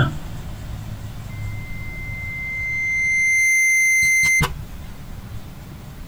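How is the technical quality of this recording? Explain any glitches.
Quality suffers from one clear fault: loudspeaker feedback squeal from 1.29 to 4.47 s. A microphone is re-capturing its own loudspeaker, and the loop gain at 2.1 kHz exceeds unity, so that tone feeds on itself. It swells over roughly two seconds into a piercing whistle that ends up around 10 dB above the rest of the sound. A spectrogram would show a bright horizontal line at 2.1 kHz that thickens and brightens. In the waveform, the envelope grows steadily over about two seconds of that stretch.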